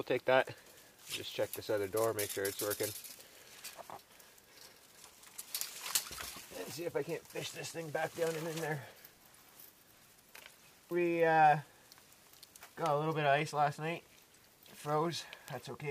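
Right near the end, at 15.48 s, there's a single sharp tick from a bit error spike: two adjacent samples jumped by a power of two and snapped straight back, peaking around -22 dBFS. It's broadband and has nothing to do with the surrounding sound.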